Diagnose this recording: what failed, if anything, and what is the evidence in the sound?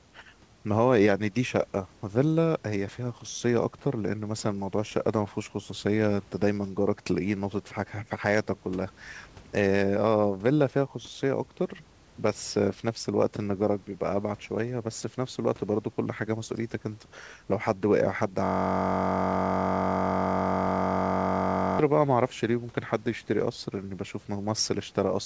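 The failure is at the driver or buffer stage: a system hang loop. From 18.45 s to 21.79 s the audio collapses into a steady buzz at about 46.9 Hz, made of one 21.33 ms fragment repeated exactly, well over a hundred times. That period fits a 1024-sample buffer. The host or driver stalled and stopped refilling it, while the audio hardware kept cycling through the same ring buffer and replaying its stale contents until the system recovered.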